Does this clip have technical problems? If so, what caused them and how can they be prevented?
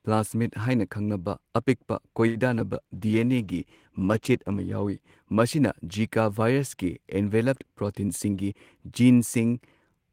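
Yes. From 2.27 to 2.37 s a speech sound is held too long, with a faint buzz: a short stall from a late packet. The jitter buffer ran empty, so the receiver stretched the last sound for 78 ms and resumed where it left off, adding 78 ms of delay. A deeper jitter buffer that adapts sooner would prevent it.

At 2.59 to 2.62 s there is a brief smear where a small piece of speech goes missing, from short concealed packet loss. About 20 ms never reached the decoder in time, and the receiver filled the gap by extending the preceding sound before blending back in. Forward error correction or redundant packets on the sending side would prevent it.

From 2.73 to 5.68 s the speech turns rough and duller, from a call bitrate drop. The bandwidth estimate fell and the Opus encoder went from 32 to 17 kbps, staying at its lowest for 1.86 s, which coarsens the coding and trims the high frequencies. A steadier network path, or a higher minimum bitrate, would prevent it.

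From 7.94 to 9.01 s the speech sounds hurried at an unchanged pitch, from a jitter buffer speed-up. The buffer held more audio than its target, so the receiver cut out short pitch-period pieces, about 70 ms in total, playing at 107% speed. A smoother network path that avoids bunched packet arrivals would prevent it.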